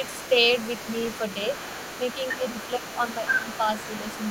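An echo canceller that likely failed to remove the far end's loudspeaker signal lets the other side's voice leak through from 0.0 s to the very end. A second voice sits behind the main talker the whole way, roughly 15 dB below it. It is faint, and two voices share one channel.

Speech is suppressed in double talk three times, where both sides were talking at once and the canceller, unable to separate its own talker from the echo, likely pulled the whole signal down. From 0.13 to 0.21 s the talker dips by around 10 dB for a brief moment. From 2.32 to 2.43 s there is a shallower dip of about 5 dB. From 3.1 to 3.67 s the loss is longer, with the voice sagging by about 5 dB in patches over roughly a third of a second.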